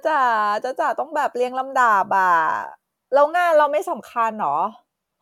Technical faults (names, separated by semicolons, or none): none